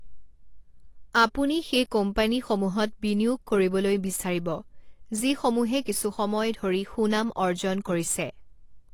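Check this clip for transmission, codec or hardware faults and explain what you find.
Two problems run through the whole clip, from start to finish.

The speech sounds dull and a bit smeared. Nothing comes through above 12 kHz, and sibilants and held vowels get a watery, warbling edge. That's likely AAC compression, the AAC-LC kind, at a low rate, roughly what you'd expect around 32 kbps. The encoder runs out of bits, so it drops the top of the spectrum and quantises the rest coarsely. That leaves gaps and swirly texture where the detail used to be.

On top of that there's sample clock jitter. The converter's timing wobbles by a couple of microseconds, so each sample lands slightly early or late. The error is biggest where the waveform moves fastest, so you hear a grainy hiss riding on the louder and brighter parts of the speech, about 30 dB down. It disappears in the pauses, which is how you tell it apart from ordinary background noise.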